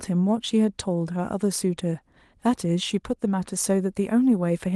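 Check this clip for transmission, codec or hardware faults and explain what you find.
I find no transmission, codec or hardware faults in this clip.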